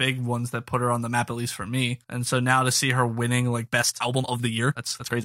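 From 3.63 s to the end, the speech abruptly runs about 1.83 times faster while its pitch stays put, a time-stretched section. The likely cause is software squeezing this stretch to fit a shorter length by dropping short pieces of audio rather than resampling it, so it sounds rushed. On a spectrogram the harmonic bands keep their frequencies while syllables crowd closer together; the waveform's envelope turns visibly denser from 3.63 s.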